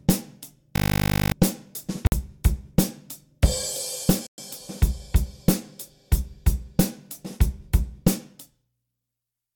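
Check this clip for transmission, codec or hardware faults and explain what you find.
Three faults show up here: one hang loop and two short dropouts.

From 0.76 to 1.32 s there's a system hang loop. The machine stalled while the audio hardware kept replaying the same 20 ms slice of its ring buffer, about 28 times over. A loop that short repeats at 50 Hz, so instead of a stutter you hear a flat, steady buzz. When it lets go, roughly half a second of audio has been skipped.

At 2.07 s and again at 4.27 s the sound drops to silence and resumes, first for 51 ms and then for 114 ms. These are likely Bluetooth stalls: interference delays packets, the headphone buffer runs empty, and playback pauses until the resent data arrives. Both sound like clean gaps.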